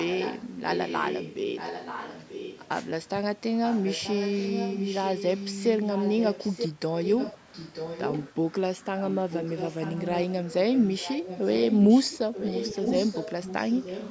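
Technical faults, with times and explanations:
0.00–1.35, 1.55–2.69, 3.65–5.64, 5.80–6.69, 7.03–8.32, 8.98–10.33 and 10.73–14.10 s: echo leak. A second copy of the speech returns about 0.93 s late, roughly 5 dB below the speech in the first and last stretches and about 10 dB below elsewhere. The likely cause is a far-end loudspeaker whose echo canceller let its own microphone pick-up back into the call. Unlike room reverberation, this is a distinct delayed repeat rather than a smeared tail.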